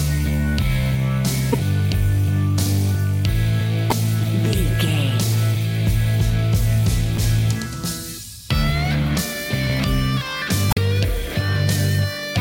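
Four short bursts of damaged data in the compressed stream break up the audio. They fall at 1.52 to 1.55 s, 3.88 to 3.93 s, 7.15 to 7.20 s and 10.70 to 10.78 s. Each lasts between 25 and 80 ms. At each point, corrupted bytes make the decoder misread its frames and lose sync until it finds a valid header again. The result is a brief chirp or squawk.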